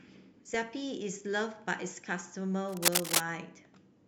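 A speech recording with a burst of harsh scratching and rustling laid over the voice from 2.69 to 3.20 s, about 5 dB louder than the speech itself. This cable scratch noise is likely from a worn cable or connector being moved, its contact resistance fluctuating rapidly.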